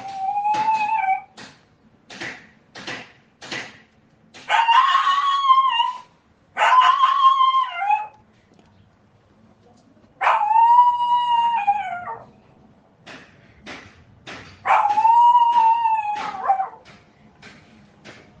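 No technical faults can be heard anywhere in this recording of sounds. Nothing in the audio breaks off, jumps or changes character from one moment to the next.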